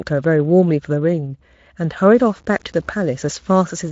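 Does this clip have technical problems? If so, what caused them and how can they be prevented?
Yes. From 2.15 s to the end of the clip the speech turns grainy, with a gritty distortion that rises and falls with the voice, and the quiet tails sputter instead of fading smoothly. That's low bit depth without dither. The error sits only around 35 dB below the signal, which fits the audio likely being truncated to 8 bits with no dither. The light Speex coding underneath doesn't hide it. To prevent it, keep the full bit depth through processing, and when reducing it, apply dither before the final rounding.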